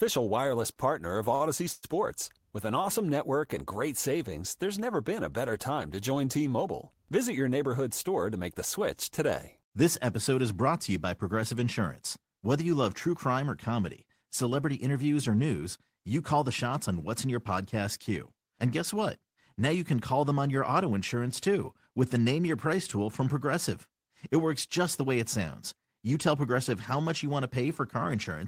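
At 0.73 to 0.78 s and again at 1.35 to 1.42 s there is a short stall from a late packet. The jitter buffer ran dry, so the receiver held the last sound for about 28 ms and then 51 ms, a slight buzzy stretch before playback resumes with nothing lost.

From 1.72 to 1.85 s a call audio freeze holds the last sound for 106 ms as a fading buzz that never drops to silence. It was likely caused by packets delayed in transit emptying the jitter buffer. The audio then continues from the same point, with a gap inserted and nothing missing.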